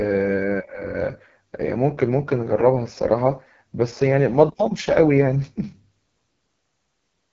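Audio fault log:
Throughout: AMR wideband (HD Voice) codec damage, heavy. The speech is rough and raspy with nothing above 7 kHz. That fits the 6.6 kbit/s mode, where the vocal tract model gets too few bits below 6.4 kHz and shaped noise fills the band above.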